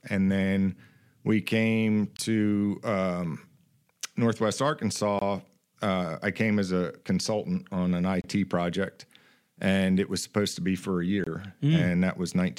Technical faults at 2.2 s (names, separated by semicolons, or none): gap between chunks